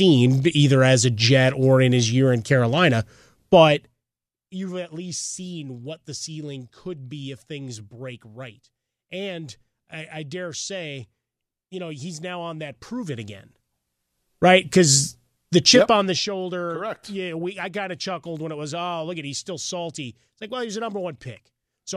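A speech clip whose gain moves in unsmoothed steps, roughly 30 per second, causing zipper noise: a ticking rasp at 3.64–4.04 s (2 dB steps, about 20 dB down, before "you've at least seen"), 12.64–14.16 s (about 20 dB up, after "know he's now on") and 15.76–16.32 s (1 dB steps, about 15 dB down).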